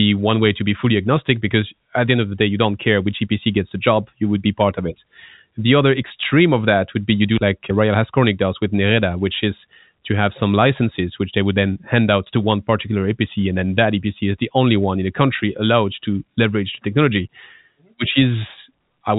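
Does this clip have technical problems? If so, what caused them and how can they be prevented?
No, the speech sits in an ordinary G.711 telephone channel, most likely A-law at 64 kbps, with nothing above about 3.8 kHz and only the faint level-following quantisation noise that this telephone coding normally leaves.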